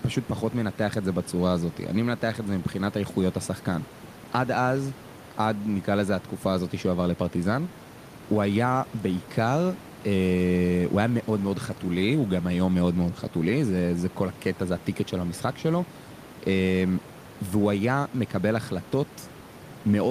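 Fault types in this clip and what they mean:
Nothing's wrong with this one; there's just a little room noise sitting about 20 dB below the speech, which belongs to the recording itself.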